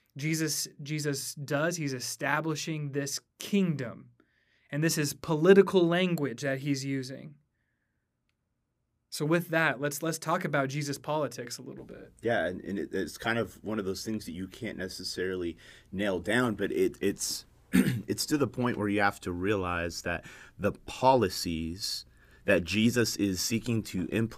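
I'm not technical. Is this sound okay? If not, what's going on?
Yes, no faults heard.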